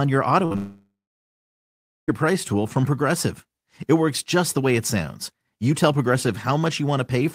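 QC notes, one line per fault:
0.45–0.52 s, burst of packet loss: several consecutive packets failed to arrive in time, so the receiver stretched the last sound for about 50 ms while fading it, then resumed with about 60 ms of audio skipped.
0.52–0.56 s, short concealed packet loss: a further 20 ms never reached the decoder, and the receiver patched the hole by continuing the preceding sound before blending back, which leaves a quick smear or wobble right after the previous gap.
0.56–2.10 s, long network dropout: the sound trails off as a fading continuation of what came before, then falls to about 1.1 s of silence, likely because no audio arrived at all for this stretch, and it resumes at 2.10 s with roughly 1.5 s lost.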